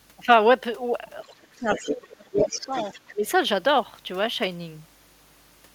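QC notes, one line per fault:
Throughout, mains hum: a steady 50 Hz tone sitting about 30 dB under the speech, the kind of thing a ground loop or nearby transformer feeds into the line.
1.06–1.24 s, 1.66–2.12 s and 2.39–3.13 s, other side's voice leaking through: a second voice creeps in, faint at first, then only around 10 to 15 dB down. That's likely loudspeaker playback the echo canceller didn't fully catch.
1.24–2.74 s and 3.13–3.25 s, speech suppressed in double talk: the talker drops hard, roughly 25 dB at worst, then about 15 dB, likely the canceller ducking everything while both sides overlap.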